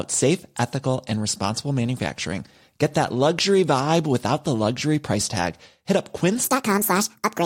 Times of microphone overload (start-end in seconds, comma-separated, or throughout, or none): none